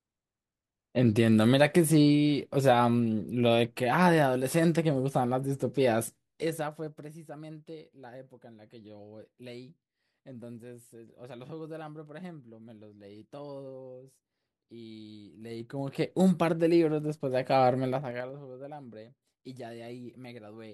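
Zipper noise runs through this speech clip at 5.85 to 7.25 s, 15.33 to 16.16 s and 17.93 to 18.39 s, heard as a ticking that rides on the level as it moves. Each time the gain shifts by about 20 dB, down, then up, then down again, but in unsmoothed jumps of 1 dB, 2 dB and 4 dB, around ten a second. Every jump puts a small click into the waveform.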